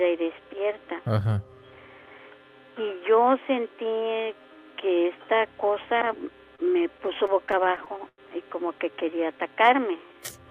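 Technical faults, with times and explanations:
6.55–6.60 s, short stall from a late packet. One packet came in late and the jitter buffer ran dry. The receiver held the last sound for about 30 ms until the packet turned up. Playback then resumed from the same point, with nothing lost. The held sound is stretched slightly and carries a slight buzz or dip. The overall delay grows by about 30 ms from here.
6.98–8.20 s, repeated stalls (stutter). Packets kept arriving too late to keep up with playback. The jitter buffer emptied eleven times over this span. Each time the receiver extended the last sound until fresh audio came in. The longest wait is about 95 ms, and about 200 ms is filled in total, roughly a sixth of the span. Nothing is missing. The audio drags and catches in a jerky stutter.
8.78–10.51 s, jitter buffer slow-down. The jitter buffer was running low or had just raised its target delay. 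The receiver rebuilt it by repeating single pitch periods and bits of pauses, many times over. This adds about 190 ms and brings the audio to about 89% of normal speed. The pitch stays the same. Sounds are drawn out and the pace feels sluggish.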